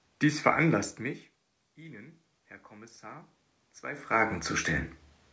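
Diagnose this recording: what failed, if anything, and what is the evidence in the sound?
The automatic gain control in the call processing chain is rising. After the level at the microphone falls by about 22 dB, apparently as the talker moves away around 1 s, the gain climbs slowly by about 7 dB from 1.75 s to 4.47 s. Voice and room noise swell together over nearly three seconds, so the background rises with the speech. The audio stops at 8 kHz, which fits a G.722 call path.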